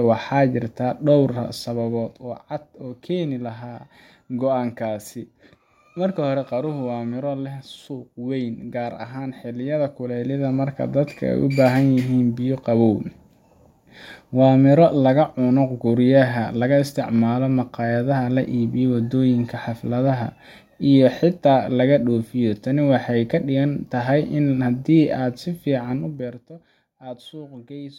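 A fine ticking rides on the speech from 1.3 to 2.65 s as the level drops about 10 dB, again from 9.57 to 10.77 s as it rises about 10 dB, and from 25.91 to 26.56 s during a fall of about 20 dB. This is zipper noise: each gain move is applied in small unsmoothed jumps, around 20 per second, and every jump leaves a tiny click in the waveform.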